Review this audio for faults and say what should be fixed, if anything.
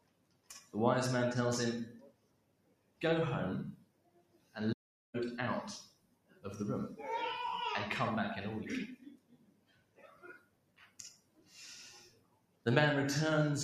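A noise suppressor tuned for speech is running across the whole clip, treating sustained material, ambience and decays as noise. Level swings of around 20 dB result, so the sound pumps and thins. On a spectrogram, held tones and tails fade unevenly while onsets stay bright. Bypass speech noise suppression for non-speech sources.

Sound cut by the noise suppressor is heard at 0.00–0.74 s, 2.01–3.01 s, 3.76–4.55 s, 5.85–6.44 s, 8.96–11.55 s and 12.02–12.66 s, each dropping by up to about 16 dB. Sustained or decaying parts sink and tails are clipped short. The waveform shows the envelope collapsing after attacks. Disable the suppressor, or raise its threshold, so steady content is left alone.

An audio dropout to silence runs from 4.73 to 5.14 s, about 406 ms of silence with no room tone. The sound stops abruptly and resumes mid-flow. The waveform shows a flat line, and the spectrogram a fully black band. 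The likely cause is a momentary input loss or stray mute. Secure the input connection and monitor for mute states while recording.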